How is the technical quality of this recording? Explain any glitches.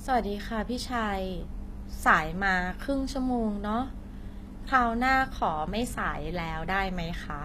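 The recording has one problem that runs the whole way through: plainly audible codec damage that sounds like HE-AAC compression. From start to finish, the s sounds and other hissy consonants come across gritty and metallic, almost lispy. The likely culprit is HE-AAC at a low bitrate, something around 24 kbps. It codes only the lower spectrum properly and fills in the treble by copying lower bands upward under a rough envelope. The top end isn't the real treble, so the harmonics don't quite match where the two halves meet, and the speech's sibilance gets that synthetic edge.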